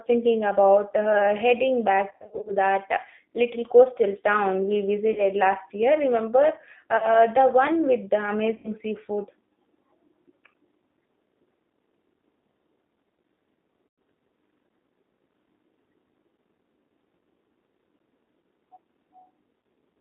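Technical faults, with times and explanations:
Throughout: G.729 codec. The speech passed through an 8 kbit/s G.729A voice codec on a line limited to about 200 Hz to 3.7 kHz. Each 10 ms frame is rebuilt from a vocal tract filter, a pitch predictor and a few pulses, so the speech sounds muffled, plainly rough and faintly synthetic.
2.10–2.53 s: VoIP packet loss concealed by the speech codec. Right after "thinking about uh heading", about 230 ms of packets went missing, scattered over roughly 360 ms with runs of up to 50 ms. The decoder kept repeating its last pitch and filter at falling gain, giving a stuttering buzzy smear.
5.13–5.25 s, 6.97–7.09 s, 8.56–8.72 s, 13.87–13.98 s, 19.61–19.64 s: VoIP packet loss concealed by the speech codec. Gaps of 40, 50, 80, 110 and 30 ms were bridged by stretching the previous frame into a fading buzz. The first falls between "little coastal town we" and "last year", and the second lands just before "the one with".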